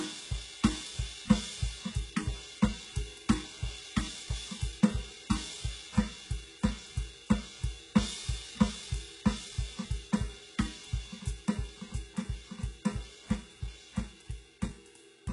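From start to finish the music carries heavy HE-AAC compression damage, likely from HE-AAC v2 at a very low bitrate, around 12 kbps. The treble is still there, but it is rebuilt from copied lower bands rather than the real upper harmonics, so cymbal-like detail turns gritty and metallic. Unlike a plain low-pass cut, the top is present but synthetic, and it stops entirely above 11.1 kHz.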